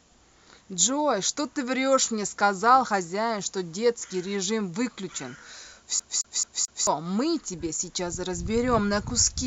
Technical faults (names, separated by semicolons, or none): CD stuck on one turn